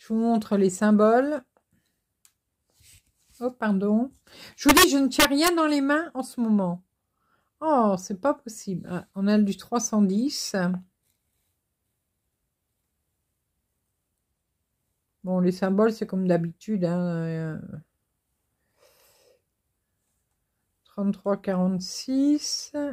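Violent, splintering cracks break through the loud passages from 4.69 to 4.84 s and again from 5.20 to 5.48 s, far harsher than ordinary clipping. This is integer overflow: the signal was pushed about 6 dB past full scale in the first burst and about 3 dB in the second. Instead of being held at the limit, each peak that went over wrapped around to the opposite sign, jumping across the whole range and producing those sharp snaps.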